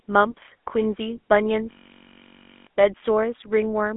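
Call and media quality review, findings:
GSM full-rate codec, whole clip. Buzzy, gravelly roughness on the speech; band limited to about 250 Hz to 3.4 kHz, nothing above 3.8 kHz. Pulse-excited vocal-tract model, consistent with a 13 kbps full-rate speech coder. Unlike a plain narrowband telephone filter, the grit comes from the coarse pulse excitation, not just missing treble.

System hang loop, 1.71 to 2.67 s. Steady buzz at 46.9 Hz: one 21.33 ms fragment repeating exactly, 45 times. Driver or host stalled while the output DMA kept cycling its ring buffer, which fits a 512-sample buffer. About a second of audio lost. Distinct from a dropout or packet-loss concealment: identical repeats rather than silence or smeared fill.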